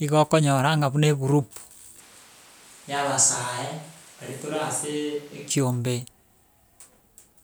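From 2.00 s to 5.50 s the voice abruptly turns hollow and roomy, thins in the bass, drops by roughly 10 dB, and picks up audible background noise, then snaps back. This is likely a switch to a distant microphone after the close one dropped out.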